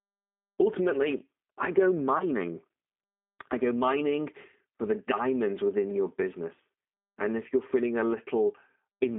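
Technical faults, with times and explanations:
Throughout: G.729 codec. The speech sits in a narrow band from about 250 Hz to 3.6 kHz, so it's thin with no air on top. The roughness is plainly audible: a slightly gritty, synthetic edge, because the decoder rebuilds each 10 ms frame from a vocal tract filter, a pitch predictor and a few pulses rather than the actual waveform. That sparse, low-rate sound fits an 8 kbit/s G.729A stream.
2.18–2.25 s: VoIP packet loss concealed by the speech codec. Right after "I go" there's a brief smeared stretch where the voice loses definition, sounding like a short gap of about 20 ms, which points to a single lost packet. The decoder filled the hole by repeating its last pitch and filter settings at falling gain. Each frame builds on the one before, so the sound stays off until around 2.25 s, well after the gap itself.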